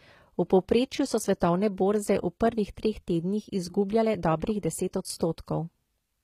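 Speech, with plainly audible coding damage throughout, likely from HE-AAC compression at a low bitrate, which fits roughly 20 kbps. The treble above a lower coded band is rebuilt from copied lower bands, so s sounds come out gritty and lispy, and nothing is present above 14.9 kHz.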